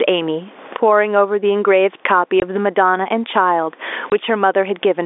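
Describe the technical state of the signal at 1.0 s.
At 1.0 s you're hearing gain pumping, which runs through the whole clip. The level swings by around 25 dB, likely from gain set too hot with a fast limiter clamping down on each loud burst, so loud and soft parts sit closer in level and the sound is squashed.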